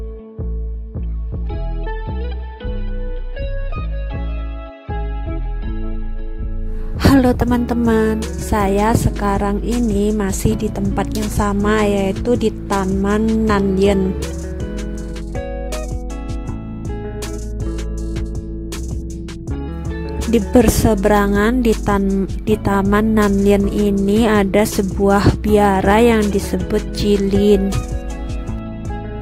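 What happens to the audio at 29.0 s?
Nothing goes wrong at 29.0 s; the audio plays through that moment intact, with no dropout, click or distortion.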